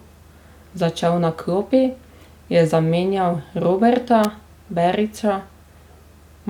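At 4.24 s an electrical switching spike cuts across the speech as a sharp snap, likely from a nearby switch or motor arcing into the audio line. The waveform shows a narrow burst peaking near -5 dBFS; a spectrogram shows a thin vertical line spanning all frequencies.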